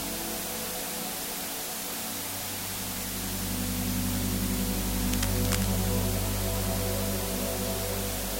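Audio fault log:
Throughout: low bit depth with dither. The audio sits on only 4 bits, and dither noise is added before each sample is rounded, so the rounding error becomes a steady, even hiss instead of distortion. The hiss runs roughly as loud as the sound itself and never changes with it. On a spectrogram it shows as a uniform grey wash across all frequencies from start to end. The waveform shows a thick fuzzy band around every part of the signal.
5.07–5.67 s: cable scratch noise. For about 0.6 s, dense, irregular crackling and rustling sit over the sound at a level a little below it. The most likely cause is a worn cable, connector or control being moved, so that its contact resistance flickers rapidly and injects bursts of broadband noise. A spectrogram would show a patch of ragged vertical streaks spread across the band.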